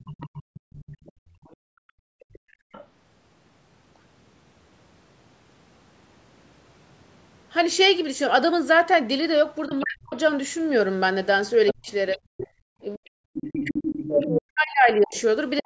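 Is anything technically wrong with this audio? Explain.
Yes. The recording carries echo-canceller faults of three kinds.

Other side's voice leaking through: a second voice sits under the speech from 0.0 to 2.87 s, well below it; from 9.7 to 10.15 s, somewhat louder; and from 11.67 s to the end, nearly as loud as the main talker. The likely cause is a loudspeaker playing the far end into the microphone, with the canceller failing to subtract it. On a spectrogram it shows as a fainter, separate set of harmonics overlapping the main ones.

Background gated by the echo canceller: between 0.43 and 2.72 s the room sound drops away, by about 35 dB at its deepest, for roughly a second and a half in total. A shorter dip of about 33 dB follows at 12.49 to 12.67 s. The canceller clamps the microphone while the loudspeaker plays. The waveform shows the noise floor collapsing to near silence, and the spectrogram shows dark vertical gaps.

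Speech suppressed in double talk: from 9.67 to 10.15 s, and again from 11.73 s to the end, the talker's own voice dips and breaks up, by around 40 dB and 35 dB at worst. This happens while the other side is also audible. The canceller likely mistook the overlap for echo and attenuated everything. The waveform shows chopped, shrunken speech envelopes, and the spectrogram shows missing chunks of the talker's harmonics.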